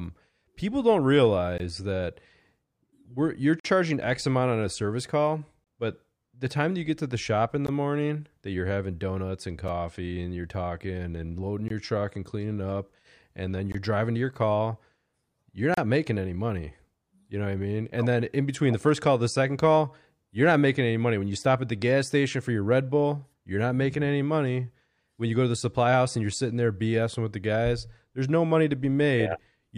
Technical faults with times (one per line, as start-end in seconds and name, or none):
1.58 gap between stream segments
3.60-3.65 gap between stream segments
5.64-5.67 gap between stream segments
7.67 gap between stream segments
9.68 gap between stream segments
11.68-11.70 gap between stream segments
13.72-13.74 gap between stream segments
15.74-15.78 gap between stream segments